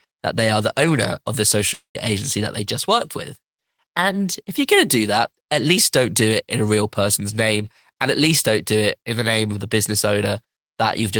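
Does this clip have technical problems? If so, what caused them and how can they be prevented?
Yes. From 1.73 to 1.97 s the speech stops, and the last sound is stretched into a fading buzz for about 210 ms. Roughly 120 ms of near-silence follows, and when the speech resumes about 220 ms of it is gone. This is a long network dropout, likely caused by a run of lost packets. A short packet loss gives only a brief warble or click. Here the concealed tail decays into silence, and the audio returns skipped ahead. A steadier connection, a larger jitter buffer and forward error correction would help prevent it.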